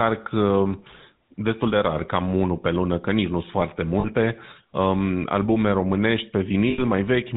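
The whole recording carries the GSM full-rate codec. The speech has a constant buzzy, gravelly edge. Nothing comes through above 4 kHz, so it sounds boxed in and dull. The codec builds each sound from a vocal-tract model fed by a coarse pulse train. Only every third excitation sample survives. That thinned excitation causes the rasp. The damage is plainly audible, and the quality fits the old 13 kbps full-rate coder.

Lost GSM frames appear twice. The first comes at 4.0 to 4.05 s, right after "nici nu sunt foarte". The decoder reuses the last good frame. A brief metallic ring replaces the sound. That fits about two missing 20 ms frames. The second is longer, at 6.7 to 6.82 s, after "um albume românești". Here the repeated frame rings for longer. That fits roughly four lost frames.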